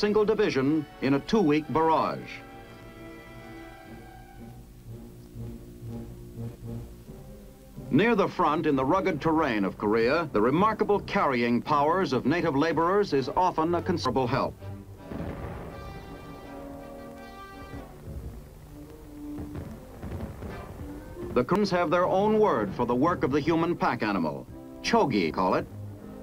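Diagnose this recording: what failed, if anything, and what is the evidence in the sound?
Audio missing between chunks at 14.06 s, 21.56 s and 25.31 s. At each point about a third of a second of sound vanishes, and the material on either side is butted together with no silence. The result is an abrupt forward jump rather than a dropout. The likely cause is in the driver or buffer stage: a recorder or processor handling the audio in blocks of roughly 4 seconds drops a slice each time it closes one block and opens the next.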